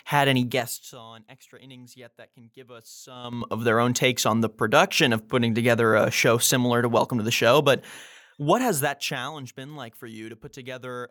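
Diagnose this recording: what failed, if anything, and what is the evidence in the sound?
Zipper noise from gain stepping in call processing: after "had any", 0.43–1.02 s, 4 dB steps drop the level about 25 dB, then 3.16–3.50 s before "of their own takes" 6 dB steps restore it, roughly ten unsmoothed steps per second, each clicking.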